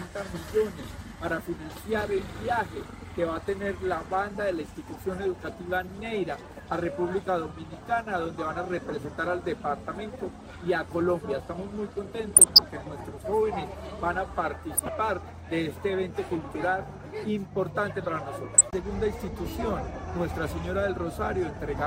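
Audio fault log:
12.36–12.68 s, 14.74–14.89 s and 18.52–18.61 s: DAB burbling. Under weak reception, bit errors of a few tenths of a percent slip past error correction into the MP2 data. Corrupted samples put short blips of noise in individual sub-bands, and corrupted scale factors make sub-bands jump in level for up to a frame, producing burbling over the sound.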